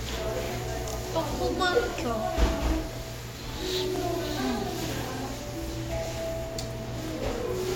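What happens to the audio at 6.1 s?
A brief click-like stutter sits between 6.06 and 6.08 s, where about 25 ms of sound plays a second time. This is overlapping chunks: the audio was handled in 1.0 s blocks, and the block beginning here starts about 25 ms before the previous one finished, so that sliver is repeated at the join. The duplicated fragment breaks the flow of the sound with a small hiccup.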